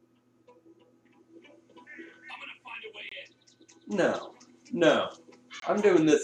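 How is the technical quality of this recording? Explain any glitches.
Two short gaps interrupt the sound, at 3.09 to 3.12 s and 5.60 to 5.63 s. Each is a Bluetooth dropout, likely one late wireless packet discarded, silencing the output for about 23 ms, which fits a single lost packet. Both are holes lasting a fraction of a second, with the sound resuming as though it had kept playing.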